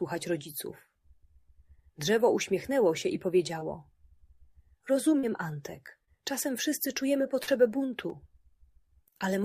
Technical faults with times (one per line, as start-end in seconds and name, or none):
3.59-3.63 short concealed packet loss
5.19-5.25 short concealed packet loss
6.05-6.09 short concealed packet loss
6.43 repeated buffer
7.43-7.49 short concealed packet loss
8.10 repeated buffer